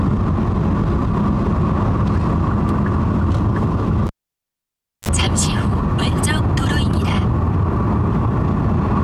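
A live cable was pulled out and plugged back in during this recording of sounds: a pop at 4.07 s, then near silence for about 0.97 s, a 38 ms burst of 50 Hz mains buzz as the plug's tip made contact, and another pop as the sound returned at 5.09 s.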